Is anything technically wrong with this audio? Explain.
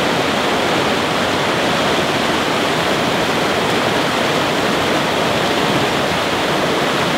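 Yes. Throughout the clip there is a gritty, inharmonic fizz riding on the louder and brighter parts of the sound, sitting around 25 dB below the signal. This is crude rate conversion. The sample rate was changed without a proper filter, simply repeating the nearest existing sample. The pattern points to a conversion from 44.1 kHz to 48 kHz. The repeats fall in a regular cycle set by the two rates, creating shifted, inharmonic copies of the audio itself.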